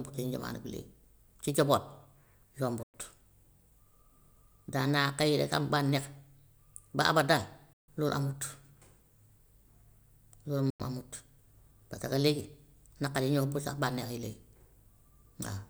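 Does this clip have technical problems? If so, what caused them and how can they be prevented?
Yes. The speech drops out completely three times, at 2.83 to 2.94 s, 7.73 to 7.89 s and 10.70 to 10.80 s, losing about 107, 147 and 93 ms. This is likely a Bluetooth dropout: audio packets arrived too late and were discarded, so the output fell silent and then resumed further along. On a waveform each gap is a flat line with abrupt edges; a spectrogram shows blank vertical strips across every frequency. Keeping the headphones close, with a clear line of sight and less 2.4 GHz interference, prevents this.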